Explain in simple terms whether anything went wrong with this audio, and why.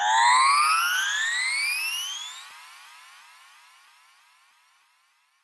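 Nothing stood out as wrong when listening to this recording of sounds, which carries only the slight softening you would expect from audio sent over an ordinary internet call.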